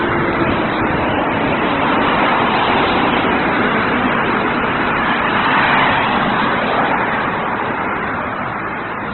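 A short recording of sound carries layered compression damage from start to finish, most likely from transcoding between lossy codecs. Nothing survives above about 4.1 kHz, so the whole clip sounds dull and boxed-in. What separates this from a single low-bitrate encode is that two distinct kinds of artefact are heard together: a swirly, smeared texture fits a very low-rate MP3 stage, while a grainy, noise-filled coarseness over it suggests a later Opus pass.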